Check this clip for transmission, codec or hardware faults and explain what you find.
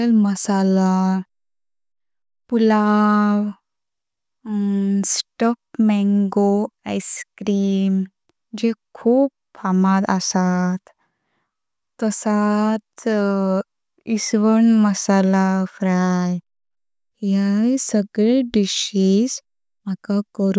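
No faults heard anywhere in the speech.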